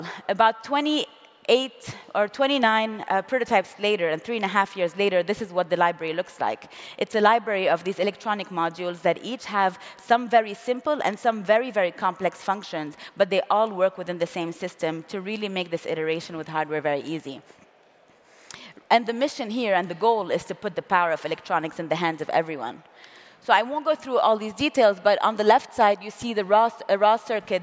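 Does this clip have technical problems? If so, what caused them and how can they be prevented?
No, there are no technical faults to be heard in this clip. With nothing wrong, there is nothing here that needs preventing.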